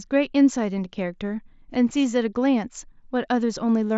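Nothing stood out on listening to this speech recording.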